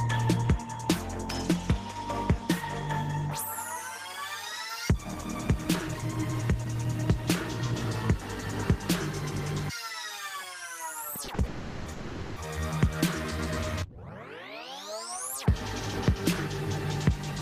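At 11.24 and 11.34 s come two short stalls from a late packet, each holding the sound for about 40 ms before it resumes from the same point. Nothing is lost. What sets these apart from a freeze is their brevity: a held sound with a slight buzz or dip, not a drawn-out fill.

Two call audio freezes follow, from 11.46 to 11.88 s and from 11.92 to 12.38 s, lasting 400 and 440 ms. The last sound carries on as a fading buzz or hiss that never reaches silence, then the audio picks up where it stopped. The likely cause is packets held up in transit until the jitter buffer emptied.

From 13.83 to 14.14 s a jitter buffer slow-down repeats small pitch periods to rebuild its reserve, adding 51 ms and running at 86% speed. Pitch stays the same while sounds stretch, unlike the frozen buzz or hiss earlier.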